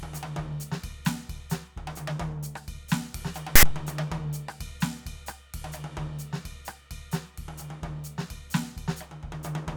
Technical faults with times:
3.56-3.63 file tags played as audio

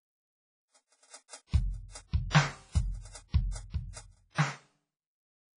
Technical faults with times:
0.00-5.58 WMA compression
1.11-1.33 pre-echo

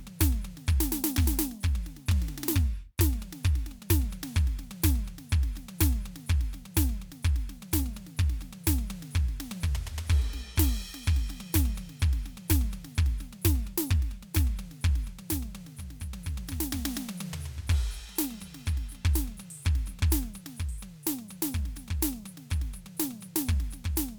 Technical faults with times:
1.86-4.07 drift correction step
7.82-8.39 drift correction step
13.31-14.29 drift correction step

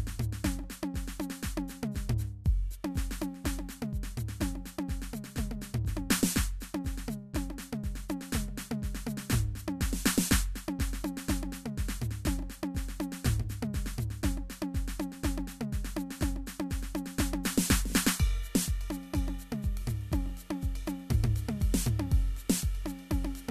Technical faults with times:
none

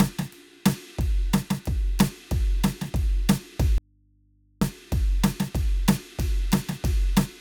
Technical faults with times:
3.78-4.61 audio dropout to a faint residue

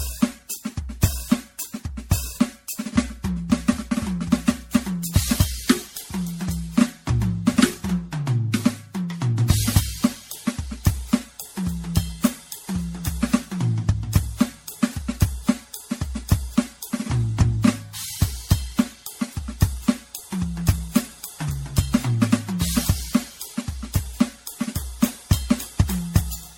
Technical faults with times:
0.00-26.57 generation loss

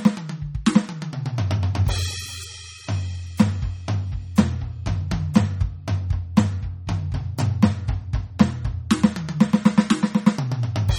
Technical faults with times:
0.00-10.98 MP3 compression

